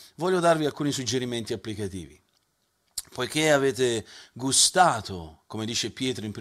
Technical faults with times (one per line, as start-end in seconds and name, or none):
none